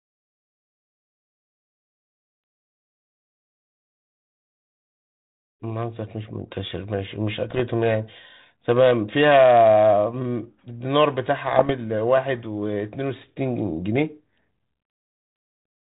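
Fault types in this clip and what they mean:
Bit errors on an ADPCM link: flipped bits, around half a percent, upset the decoder's step size and predictor, leaving pops and rough, level-jumping bursts near 7.5 and 11.5 seconds.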